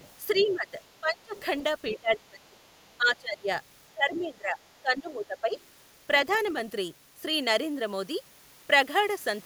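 Speech clip where a second, fainter voice sits under the main talker: the other side's voice leaking through at 0.0 to 0.53 s, 1.36 to 1.99 s, 2.79 to 2.94 s, 4.17 to 4.25 s and 6.32 to 6.48 s, roughly 20 to 40 dB below the speech. That's likely far-end audio from a loudspeaker that the echo canceller didn't fully remove. There's also speech suppressed in double talk from 0.34 to 1.36 s and 1.9 to 5.55 s, where the talker's level dips by up to about 25 dB and 20 dB respectively, totalling under a second in the first stretch and around three seconds in the second. It's likely the canceller couldn't separate the talker from the echo while both sides overlapped and turned everything down.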